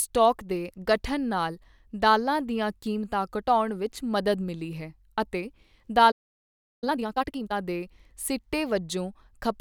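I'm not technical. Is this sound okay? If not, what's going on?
No. At 6.11 s the speech suddenly cuts out and the clip goes silent for about 0.7 s before the sound comes back at 6.84 s. This is a playback stall: the player most likely ran short of incoming audio, or was briefly held up by something else on the device, so for that moment it had nothing to send to the speakers and simply paused.

Right after the gap, from 6.84 s to 7.54 s, the speech comes out hurried, at about double its normal pace, yet the pitch stays normal rather than turning squeaky. This is time-compressed catch-up. Having fallen behind during the pause, the player trims out tiny slices of audio and blends the remaining pieces together, so it gets back on schedule quickly without raising the pitch.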